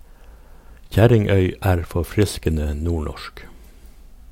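Clock slip clicks run from 0.20 s to 4.23 s: faint ticks roughly every 0.15 s through the speech, some thirty in all. A single sample is dropped or repeated each time, likely from two unsynchronised clocks drifting apart by about 150 ppm.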